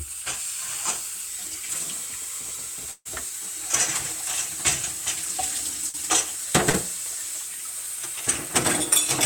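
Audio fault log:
2.91–3.07 s, burst of packet loss: about 140 ms of audio never arrived in time. The receiver stretched the last sound for roughly 137 ms, fading it down to about 30 ms of silence, then jumped ahead. On a spectrogram this shows as smeared, repeating frames dimming into a blank strip. The waveform then restarts abruptly.
5.89 s and 6.69 s, short concealed packet loss: each time about 40 ms went missing. The receiver filled the gap by extending the preceding sound, then blended back into the real audio, which is heard as a brief smear or wobble. A spectrogram shows a thin, blurred vertical band.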